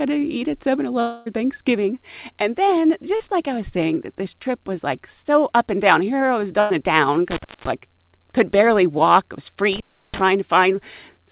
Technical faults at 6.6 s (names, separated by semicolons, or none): burst of packet loss